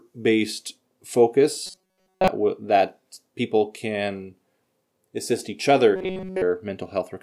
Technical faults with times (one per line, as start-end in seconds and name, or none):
1.66-2.28 robotic sound from repeated short buffers
5.96-6.42 robotic sound from repeated short buffers